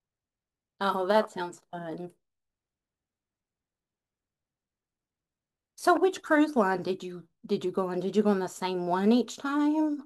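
Speech with sample clock jitter throughout: the converter clock wanders by a few microseconds, adding a roughness about 35 dB below the signal that grows on loud, bright passages and vanishes in silences.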